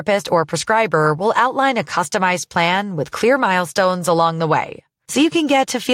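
Listening to this speech recording, nothing stood out as a technical problem.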